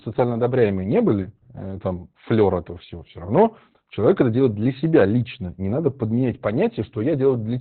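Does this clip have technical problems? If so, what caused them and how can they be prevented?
Yes. Throughout, the speech sounds muffled, hoarse and slightly robotic, with nothing above 4.3 kHz. This is heavy Opus voice compression: its SILK coder narrowed the band to narrowband and coded the excitation coarsely, which fits a bitrate near 8 kbps. Encoding at 24 kbps or higher lets Opus keep wideband audio and finer detail.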